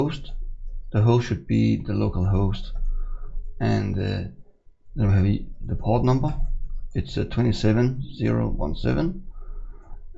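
Nothing in this audio stands out as a technical fault; it just runs along without any glitches worth pointing to.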